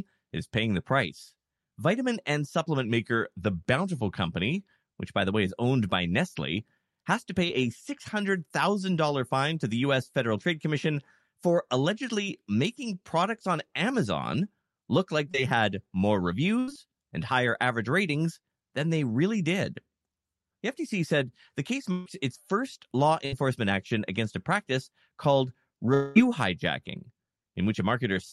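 From 2.85 to 4.16 s there is a drift correction step. The sound drops about a semitone, roughly 95 cents, and runs about 5% slow. Speed and pitch fall together. This is likely a clock-matching stage changing the playback rate in one step to rebalance its buffer.

At 7.46 to 7.62 s comes a short concealed packet loss. About 20 ms of audio never arrived in time. The receiver filled the hole by carrying the last sound forward, then blended back. The patch runs slightly longer than the gap. It is heard as a brief smear. A second short concealed packet loss follows at 15.32 to 15.36 s. Again 20 ms is missing and patched. It gives a small wobble.

Three bursts of packet loss follow. The first runs from 16.60 to 16.70 s, after "had more" and before "and higher average ratings". About 80 ms is lost. The second runs from 21.92 to 22.08 s, after "said the case" and before "its first law". It is the longest of the three, at 140 ms, and it never reaches silence. 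The third runs from 23.26 to 23.34 s and loses about 60 ms. In each, the last sound is stretched into a fading buzz or hiss. Then the audio jumps ahead, with the lost part gone.

From 25.94 to 26.18 s, after "against a practice called", there is a long network dropout. About 220 ms is missing. This is likely a stretch where no packets got through. The receiver carries the last sound on as a decaying buzz or hiss for almost the whole gap, with no silence. The audio then resumes further on. The lost part is simply gone.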